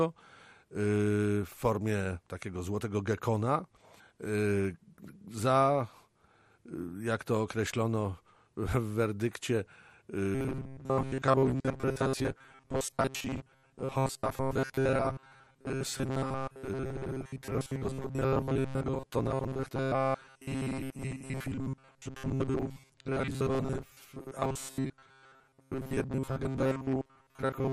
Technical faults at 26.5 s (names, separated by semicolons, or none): MP2 compression; robotic sound from repeated short buffers; DAB burbling